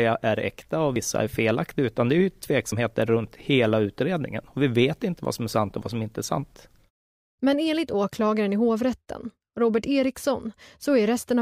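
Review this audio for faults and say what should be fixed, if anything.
The speech has two points where the sound jumps forward, at 0.96 s, between "är äkta och" and "är felaktiga utan det", and at 2.72 s, between "utan det är ju" and "runt hela utredningen". There is no gap at either point. About 40 ms of audio is missing at each point and the two sides are spliced together, which is likely a dropped buffer (overrun). Capture fell behind and the hardware overwrote unread samples. To prevent it, enlarge the capture buffer or raise the priority of the recording thread.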